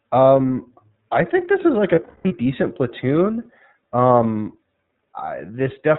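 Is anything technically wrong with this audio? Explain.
Yes, two things. The whole clip runs through the iLBC codec: nothing above 4 kHz, and the speech sounds a bit rough and synthetic, which fits its 13.33 kbps, 30 ms mode.

Then there are lost iLBC frames from 1.95 to 2.32 s, between "this is like a" and "decent platoon". About 270 ms goes missing across 360 ms, with the longest run around a fifth of a second. The decoder repeats the last pitch cycle mixed with noise, so you hear a held, buzzy vowel that snaps back straight away.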